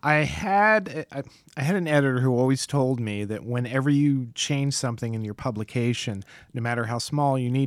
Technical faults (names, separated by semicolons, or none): none